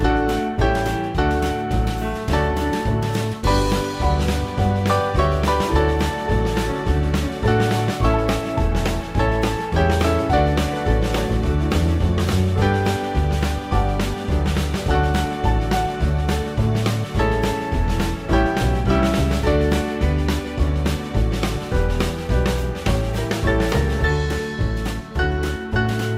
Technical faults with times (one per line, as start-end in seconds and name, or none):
none